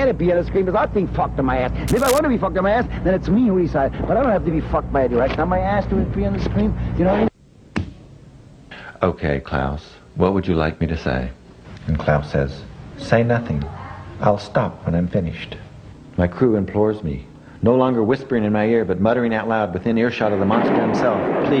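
From 1.88 to 2.19 s, a burst of cable scratch noise sits over the sound: dense, uneven crackle and rustle roughly 10 dB below the signal. It likely comes from a worn cable or connector being moved, its contact resistance fluctuating rapidly.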